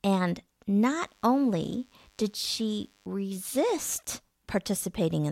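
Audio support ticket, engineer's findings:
DECT cordless phone buzz, 0.92–3.07 s, under the speech. Steady thin buzz at 100 Hz, well below the voice, roughly 40 dB down. Nearby DECT handset or base bursting every 10 ms, rectified in the audio input stage. Spectrogram: comb of evenly spaced harmonic lines at 100 Hz multiples, flat across that span. Waveform: regular spikes every 10 ms, visible in pauses. Check phone placement and input shielding.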